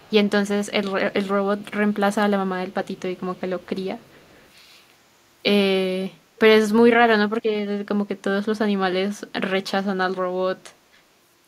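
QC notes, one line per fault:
0.0–0.3 s, echo leak: a faint copy of the speech returns 423 ms late, about 35 dB down, likely a far-end loudspeaker echo the canceller missed; spectrogram shows weak repeated harmonics.
1.42–1.65 s, echo leak: a short, quiet delayed repeat at 423 ms and about 35 dB below the speech, likely residual loudspeaker echo; a faint offset ghost of the preceding formants.
2.96–3.0, 3.17–3.21 and 3.37–3.41 s, echo leak: three brief scraps of echo at 423 ms delay, about 35 dB down, likely canceller leakage; thin isolated smudges on the spectrogram.
3.63–4.49 s, echo leak: a longer stretch of delayed echo, 423 ms behind and about 35 dB quieter, likely an uncancelled far-end loudspeaker path; faint shifted harmonic traces under the speech.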